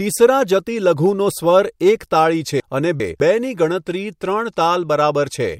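Just after "તાળી છે", from 2.6 to 3.2 s, the speech jumbles briefly. These are chunks out of order: one 200 ms chunk arrived two chunks late and played after its successors, leaving three hard joins but losing nothing.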